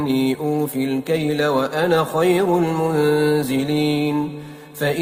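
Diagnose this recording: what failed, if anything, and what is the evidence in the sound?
The failure is clock drift between sender and receiver, at the network and jitter-buffer stage. The sending end's clock runs fast, by something like 5 percent. Audio arrives quicker than the receiver plays it out, so its jitter buffer keeps filling. The evidence is a sense of timing that never settles. Small hiccups recur for the whole clip, at uneven intervals, rather than one isolated glitch.

The repeated timing corrections are the receiver's response. To stop the buffer overflowing, it keeps cutting short pieces out of the stream. These edits run from 0.05 s to 5.00 s, all in the same direction. The net effect is playback at about 105 percent speed. Each cut is tiny. Together they give slight skips and an unsteady, hurried pace.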